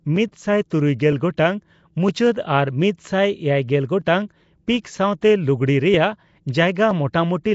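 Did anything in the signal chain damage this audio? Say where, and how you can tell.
Yes. Throughout the speech there is plainly audible codec damage: a rough, hissy halo with a smeared, underwater quality, and nothing above 7.7 kHz. That points to the codec stage, likely Nellymoser Asao at a rate that fits 32 kbps. Its fixed low bit budget leaves weak bands empty and fills them with noise.

From 0.16 s to 6.91 s, a click repeats about every 0.96 s, roughly seven times. That steady interval marks clock drift buffer slips at the buffer between two devices, likely caused by a clock mismatch of several hundred ppm. Each time the buffer fills or empties, a few tens of samples are dropped or repeated.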